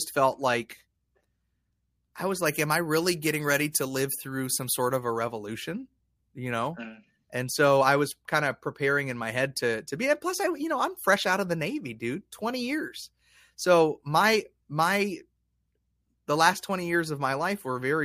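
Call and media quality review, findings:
Pre-emphasis left on, 2.46 to 5.00 s. Speech turns thin, bright and sibilant. Treble sits about 11 dB hot at 10 kHz relative to 1 kHz. Shape fits a 50 µs FM emphasis curve. Boost applied upstream, matching de-emphasis never applied on playback. Probable component: receive-side filter stage skipped for this segment.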